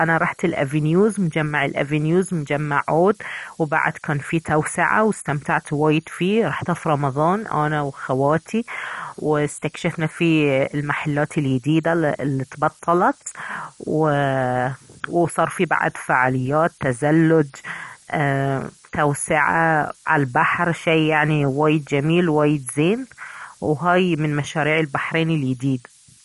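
A switching supply whistle runs through the whole recording: a thin, high tone wandering between about 13.5 and 13.8 kHz, roughly 15 dB below the speech. It comes from a power supply cycling in an audible burst mode or beating with another supply.

Throughout, the speech sounds dull and granular, with a gurgling edge on the voice and no content above about 11.3 kHz apart from that whistle. This is likely MP2 compression at a low rate, around 48 kbps, where upper sub-bands are switched off and the rest coarsely quantised.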